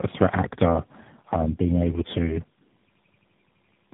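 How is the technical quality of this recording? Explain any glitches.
The recording is poor: the whole clip carries coding damage, and it ends in a frozen, repeating stutter.

Tandem speech coding runs throughout. The speech sounds like it was decoded and re-encoded across three speech codecs in a row, which fits a GSM full-rate, GSM full-rate, AMR-NB chain, with each coder compounding the previous one's errors. Nothing remains above 3.8 kHz, so the sound is muffled, rough and warbly. Unlike a single low-bitrate codec, the artefacts are layered and grainier.

A system hang loop starts at 2.90 s, right after "um being able to", and lasts until 3.93 s. The same 85.33 ms slice repeats 12 times, a machine-gun stutter at 11.7 Hz, which fits a 4096-sample ring buffer cycling while the system froze. About a second of audio is lost. Unlike a network dropout, the repeats are exact copies.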